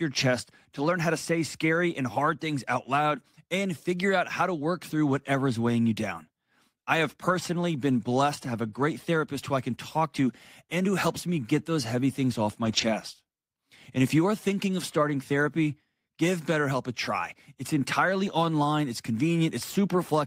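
A speech recording with two short patches of lost packets rebuilt from error correction. The first runs from 7.29 to 7.35 s, just after "you down I have". About 40 ms of audio is rebuilt there, which fits two lost packets. The second runs from 12.65 to 12.83 s, after "those heavy things off". About 100 ms is rebuilt there, which points to five packets. No gap is heard. The decoder filled each loss with a low-bitrate copy carried in the next packet. Those stretches sound rougher and noisier.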